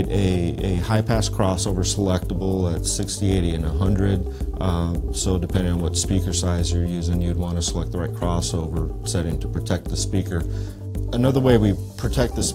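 The whole clip carries overlap-add ripple: the level pumps by about 6 dB at a rate of roughly 300 Hz, which gives the sound a metallic buzz with extra tones around each note. It comes from frames being windowed and overlapped in a way that doesn't sum to a flat gain.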